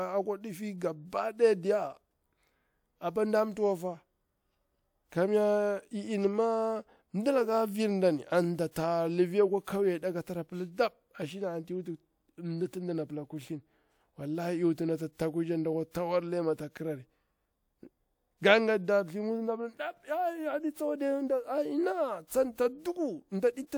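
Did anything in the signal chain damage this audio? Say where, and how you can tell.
Yes. The damage is at the codec stage. There is pre-echo at 8.71 to 8.76 s. A short hiss runs for about 48 ms ahead of a sharp speech onset, which lands softened. The codec spread the attack's quantisation noise across its whole transform block, including the silence before it.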